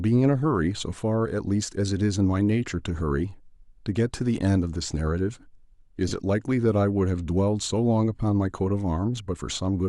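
Speech, with a brief noisy smear from 6.08 to 6.11 s, about 30 ms long. The cause is lost LE Audio frames: the LC3 decoder filled the gap by repeating the last spectrum with randomised signs, and the 30 ms span fits four 7.5 ms frames.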